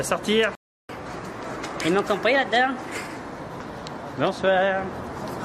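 The player most likely ran short of buffered data, or its playback thread was held up, at 0.55 s. Output drops to silence until 0.89 s, a gap of 0.34 s, so the playback stall cuts the sound off mid-flow rather than at a natural pause. Then the audio returns.

To recover the time lost in that gap, the player then resamples its backlog, producing catch-up at higher speed from 0.89 s to 3.16 s. Everything runs at 1.15 times normal speed, and because resampling shifts pitch along with tempo, the sound rises by roughly two semitones and takes on a hurried quality. At 3.16 s the player has caught up, and both speed and pitch settle back to their proper values.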